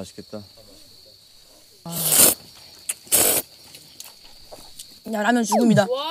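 The audio has two kinds of fault. At 1.86 s there is a brief blip from damaged data in a compressed stream. Some bytes in the encoded file were corrupt at that point. The decoder misread the frame, lost sync and had to hunt for the next valid frame header. That produces the short burst of wrong sound. Then comes a repeated buffer at 1.98 s, 3.26 s and 5.08 s. Each time, fresh audio arrived late, so the playback device replayed the piece it already held. Each repeat lasts about 20 ms, which fits a 20 ms buffer. The piece plays twice at 1.98 s and 5.08 s, and three times at 3.26 s. The joins are hard, so each repeat is heard as a click or a very short buzzy stutter. No audio seems to be skipped around them.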